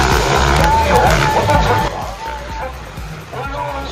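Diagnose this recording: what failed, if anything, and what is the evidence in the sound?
A digital gain stage, likely a level setting applied without a ramp, stepped abruptly at 1.88 s, a sudden gain jump of about -11 dB. From that instant to the end, the sound and its background noise drop together in one step, with no fade between levels.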